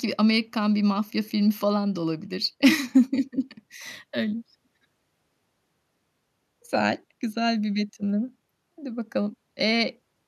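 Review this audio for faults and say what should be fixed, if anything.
Right after "filmi falan da olabilir" there's a stretch of hard clipping from 2.64 to 2.98 s. The signal went about 4 dB past what the stage could pass, so the peaks got sliced flat. Those squared-off tops add harmonics well up the spectrum, which is why the speech crackles on its peaks for that third of a second. To prevent it, pull the input gain down or leave more headroom so peaks stay below full scale.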